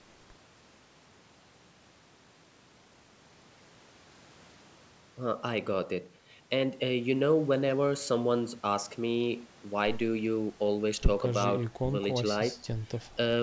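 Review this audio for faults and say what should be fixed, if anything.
Nothing here needs fixing; the speech has simply passed through a call's microphone processing, which trims the lowest bass and leaves nothing above 8 kHz, and that's just how such a path normally sounds.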